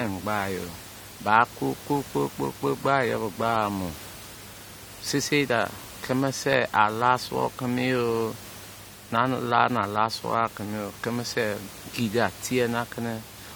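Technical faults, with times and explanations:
No technical faults detected.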